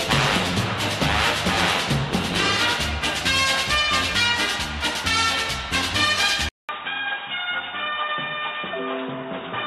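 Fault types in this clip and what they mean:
Input switched to a poorer device: at 6.49 s a 200 ms silence, then dull, boxy sound with nothing above 3.8 kHz, a few decibels quieter, with faint new hiss, likely a narrower-band microphone taking over. Spectrogram: flat ceiling after the gap; waveform: brief flatline, smaller envelope.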